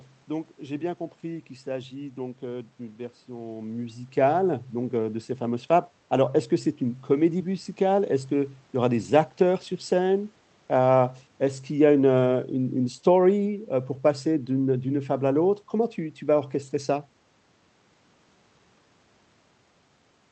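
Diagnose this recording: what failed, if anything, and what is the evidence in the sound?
Nothing in the signal chain has failed at any stage. The call path is audible in the top end stopping around 8 kHz with the coding noise of an Opus call, over room noise, and the level shifts near 3.5 s and 17 s come from the talker moving relative to the microphone.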